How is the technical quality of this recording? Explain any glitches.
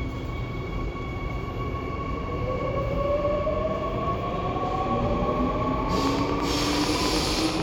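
The recording has one clear glitch near the end. A train of clicks runs from 6.07 to 7.61 s: about fifteen near-identical pulses, evenly spaced at 9.2 per second and peaking about 15 dB above the sound. They are likely from electrical interference or a faulty connection or power supply, and they are heard as a steady ticking over the sound.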